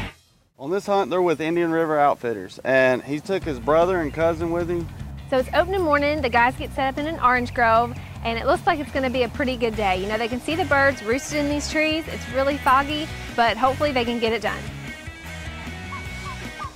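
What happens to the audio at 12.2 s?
Nothing goes wrong at 12.2 s; the audio carries on intact through that moment, with no dropout, click or distortion to be heard.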